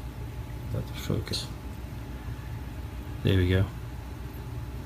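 At 1.33 s, damaged data in the compressed stream makes the decoder misread a frame and lose sync, giving a brief glitch.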